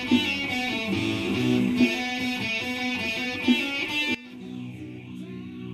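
At 4.15 s, a sudden gain jump cuts about 18 dB. Sound and background drop together until the end, likely from a gain change applied without a ramp.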